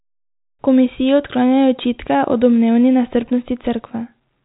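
Nothing is technically wrong with this speech clip. It has the narrow G.711 telephone coding sound, with nothing above 4 kHz and only a faint hiss that rises and falls with the speech.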